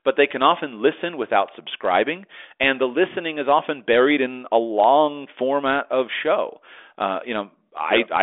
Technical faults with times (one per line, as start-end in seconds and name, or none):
none